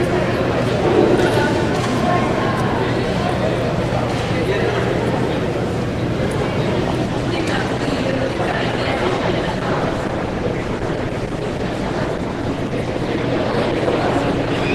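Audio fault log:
7.06–14.74 s, adaptive stream at a lower bitrate: codec artefacts suddenly rise with no gap, which fits the stream switching from 64 to 16 kbit/s Opus.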